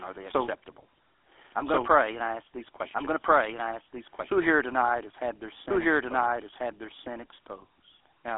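Speech here is heard twice throughout: a doubled audio track, with a second full-band copy about as loud as the first trailing roughly one and a half seconds behind, dry and unreverberant. It is likely caused by a slower second capture path or misaligned edit. On a waveform, each burst of energy reappears as a matching shape that far later. The speech also carries plainly audible GSM full-rate codec damage, a buzzy, gravelly roughness consistent with the 13 kbps GSM full-rate codec, which rebuilds the voice from a vocal-tract model and sparse pulses. A spectrogram shows a telephone band of about 300 Hz to 3.4 kHz, with nothing above 3.7 kHz.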